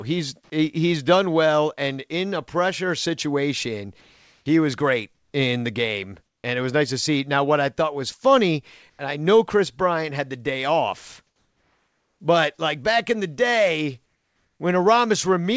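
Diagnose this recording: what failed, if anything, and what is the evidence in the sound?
In six pauses the real room background drops out and is replaced by a steady, featureless hiss: 4.01–4.46 s after "in a pressure situation", 5.15–5.33 s between "was great" and "in the game", then 6.26–6.44, 8.90–8.99, 11.27–12.20 and 14.06–14.60 s. The substitute sits from level with the true background to about 5 dB below it, except at 6.26 s, where it jumps about 13 dB louder. This is comfort noise in place of the background, likely from call processing with discontinuous transmission: the sender went silent and the receiver synthesised shaped noise, all within a band that ends at 8 kHz, which fits G.722 at 64 kbps.

At 8.97 s, between "I thought was funny" and "I know", the next phrase starts abruptly, its soft beginning missing for about 20 ms and the comfort noise running right up to it. This is an onset clipped by the voice detector, likely in the same call-processing stage: the detector was slow to notice sound resuming, so those first moments were never sent and synthetic noise covered them.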